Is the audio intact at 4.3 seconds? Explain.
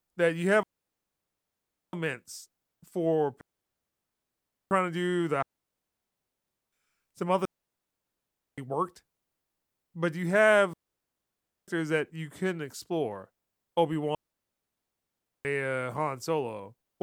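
No. A digital wireless dropout runs from 3.41 to 4.71 s, so 4.3 s falls inside a mute lasting 1.3 s. The receiver lost too much of the digital radio stream to rebuild the signal, and rather than pass corrupted data it muted the output with a very brief fade. The speech simply drops into near silence, a clean gap with no crackle or noise burst at either edge, then resumes.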